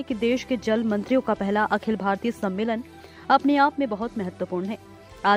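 No technical faults can be heard anywhere in the clip.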